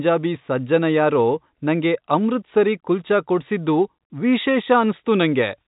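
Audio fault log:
Fault-free; telephone-band speech, nothing above 3.8 kHz.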